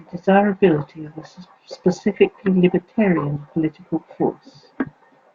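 No technical faults can be heard anywhere here.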